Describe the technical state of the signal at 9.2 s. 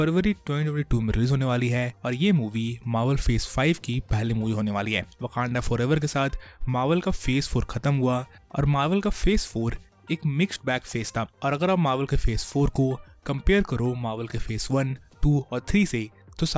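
At 9.2 s the high end sounds gritty and metallic, packed hard against 8 kHz. This is aliasing, present throughout: content above the fold folds back roughly 25 dB down, which fits an unfiltered drop to 16 kHz.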